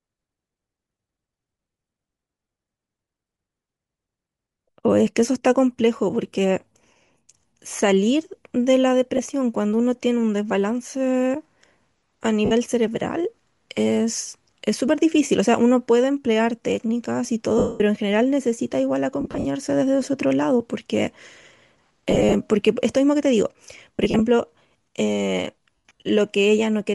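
Throughout, the speech has a grainy, breathy upper edge. Likely cause: Bluetooth LC3 compression, with damage that fits a low bitrate of about 48 kbps.

At 7.72 s a repeated buffer gives a brief buzzy click. One 5.8 ms chunk plays twice more, which fits a 256-sample buffer.

Lost LE Audio frames follow. The decoder reuses the last spectrum, so the sound smears into noise and fades. There are short gaps at 9.17 s (20 ms) and 12.45 s (60 ms). A 220 ms loss at 17.58 s dies away toward silence. Scattered losses over roughly a quarter second come at 19.21, 22.11, 23.96 and 25.76 s.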